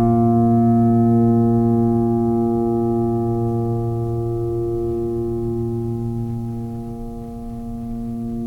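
No technical faults can be heard at any point in this music clip; the signal stays continuous and intact throughout.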